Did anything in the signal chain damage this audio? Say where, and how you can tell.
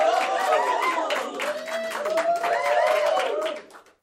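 Yes. Clock slip clicks run from 0.10 to 4.02 s, about every 20 ms, heard as a soft rattle under the sound. The likely cause is two unsynchronised converter clocks about 1000 ppm apart. Each slip drops or repeats one sample, leaving small waveform steps and evenly spaced thin vertical lines on a spectrogram.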